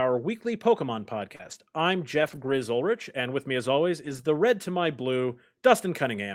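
At 1.35 to 1.41 s a short concealed packet loss leaves about 40 ms of speech missing. The decoder extends the preceding sound to bridge the gap and then blends back, producing a brief smear. Overlapping it, from 1.39 to 1.53 s, is a lost packet rebuilt from error correction. This is about 80 ms of audio, consistent with four 20 ms packets, decoded from the low-bitrate in-band copies and sounding rougher and noisier. The same rebuild occurs from 2.19 to 2.53 s, a longer 180 ms stretch, and again from 4.05 to 4.19 s, just after "with me as always". A second concealed loss at 4.21 to 4.25 s fills a 20 ms gap immediately before "red to my", heard as a brief smear or wobble.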